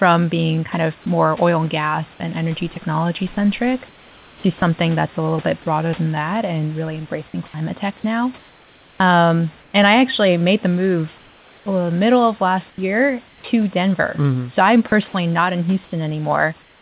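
At 2.74 to 2.76 s, right after "and gas and energy", a 20 ms slice of speech vanishes under a flat hiss. That's likely sound dropped by the voice detector: the sender treated the sound as background, stopped transmitting, and the receiver filled in with comfort noise.

From 3.88 to 4.62 s, just before "that's a little bit", the speech gets choppy. About 600 ms is swapped for synthetic noise in pieces. It's likely sound chopped by the voice detector, which kept toggling on and off.

Between 8.38 and 9.74 s, the pauses lose their natural texture and turn into a smooth, featureless hiss. The same thing happens from 11.18 to 11.66 s, between "actually made the move" and "uh middle of", where the fill sits about 3 dB quieter than the real room noise. That's likely comfort noise in place of the background, generated while transmission was paused.

Right at 11.64 to 11.66 s, the start of "uh middle of" loses its first 20 ms and comes in abruptly, without its soft beginning. 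That's likely an onset clipped by the voice detector, which reacted too slowly when the speech resumed.

The pauses from 12.7 to 13.44 s go back to comfort noise, probably from the same pause-time filling. At 14.88 to 14.92 s, another 40 ms of speech drops out into hiss, probably the detector again. The final 16.62 to 16.81 s is comfort noise as well, again about 3 dB down, all heard over a band that stops at 4 kHz, which fits narrowband G.711.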